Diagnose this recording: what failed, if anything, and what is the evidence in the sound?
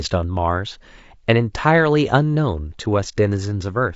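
The damage sits at the codec stage and runs through the whole clip. The speech has a rough, grainy texture, with noise filling the gaps between the harmonics and a thin, synthetic top end. That's the signature of low-delay AAC compression, likely AAC-ELD at something like 32 kbps. Its short frames can't resolve pitch harmonics cleanly, and at that rate there aren't enough bits to cover them, so the artefacts are plainly audible.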